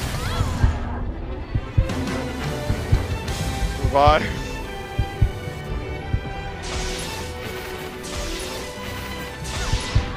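From 2.49 to 5.61 s a hard, raspy GSM phone buzz sits about 24 dB below the audio, a steady 217 Hz tone rich in harmonics. A nearby 2G handset on a call is pulsing its transmitter, and the audio circuitry rectifies those bursts. A spectrogram shows evenly stacked horizontal lines at 217 Hz multiples across that span.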